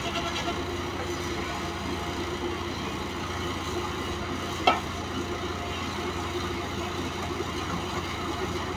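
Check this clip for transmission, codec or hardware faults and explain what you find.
No faults can be heard.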